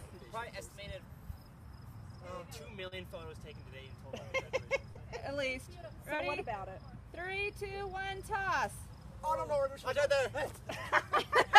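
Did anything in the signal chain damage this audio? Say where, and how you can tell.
Yes, at the network stage: three instances of short concealed packet loss, at 2.87 to 2.94 s, 4.91 to 4.98 s and 6.15 to 6.22 s. Each time about 40 ms of audio arrived too late or not at all, and the receiver extended the preceding sound before crossfading back, giving a brief smear or wobble. On a spectrogram each gap shows as a short stretch of flattened, repeated harmonics or smooth noise. The waveform shows a repeated cycle with a soft seam.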